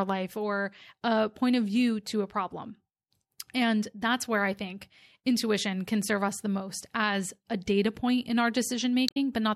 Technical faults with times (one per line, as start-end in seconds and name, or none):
9.05-9.17 damaged data in a compressed stream